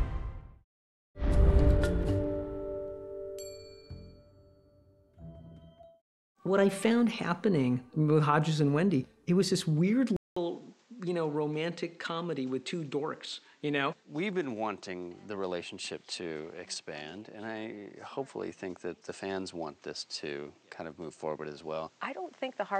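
At 10.17 s a gap of 200 ms breaks the audio. From there to the end the sound is duller and boxier, a few decibels quieter, and carries a new background noise sitting roughly 30 dB below the signal. This is likely the input switched to a poorer device. On a spectrogram, energy above 8.6 kHz disappears after the gap. The waveform shows a short flat section, then a smaller envelope over a raised noise floor.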